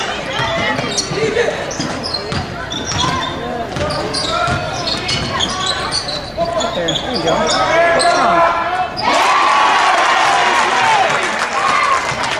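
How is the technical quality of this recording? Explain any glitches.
No technical glitches can be heard in this recording.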